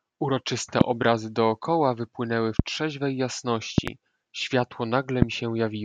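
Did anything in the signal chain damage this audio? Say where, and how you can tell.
Yes. Loud pops sit on top of the speech at 0.81–0.83, 2.59–2.62 and 5.22–5.25 s, plus a double pop at 3.78–3.90 s, roughly 20 dB above the signal and the last nearer 25 dB. The speech continues underneath, pointing to an added voltage step, likely from a connector or switch in the analogue wiring.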